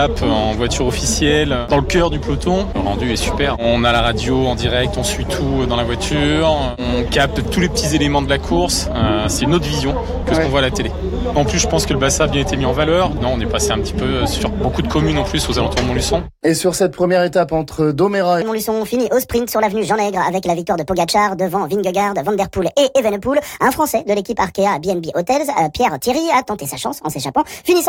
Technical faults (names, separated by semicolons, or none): section at the wrong speed